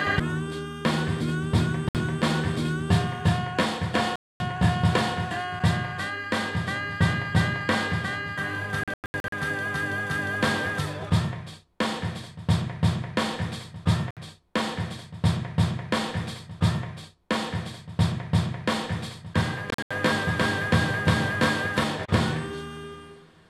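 The audio cuts to silence five times: briefly at 1.89 s and 14.11 s (about 60 ms each), for roughly 0.24 s at 4.16 s, in scattered gaps across 8.84 to 9.32 s and 19.70 to 19.91 s, then picks up as if it had kept playing. That's likely Bluetooth dropout, with packets missing the headphones.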